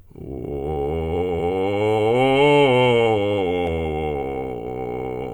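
No technical faults can be heard anywhere in the music.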